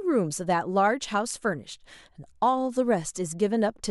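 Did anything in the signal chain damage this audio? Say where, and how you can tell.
No, nothing along the chain seems to have damaged this speech; there's nothing to point to at any stage.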